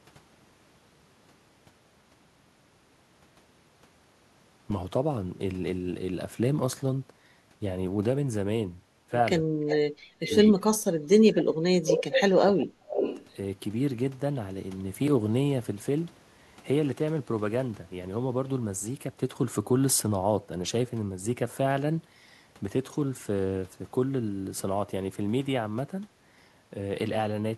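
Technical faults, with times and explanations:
9.64–10.33 s, 11.16–12.08 s, 12.44–12.99 s: speech suppressed in double talk. With both sides talking at once, the echo canceller likely could not tell the near talker from loudspeaker echo and attenuated everything, so the speech dips by up to about 35 dB or drops out in pieces.
9.68–9.76 s, 10.23–10.50 s, 11.90–12.20 s, 12.59–12.64 s, 12.91–13.26 s: echo leak. A loudspeaker's sound, likely not fully cancelled at the far end, returns as a delayed copy 337 to 353 ms late, in short scraps from about 25 dB to about 5 dB below the speech.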